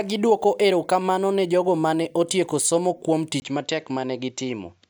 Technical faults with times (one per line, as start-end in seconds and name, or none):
3.40-4.89 input switched to a poorer device